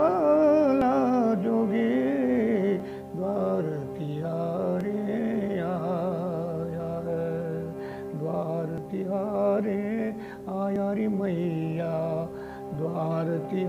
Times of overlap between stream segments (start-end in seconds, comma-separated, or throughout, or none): 0.81, 2.80, 4.81, 8.78, 10.76, 12.75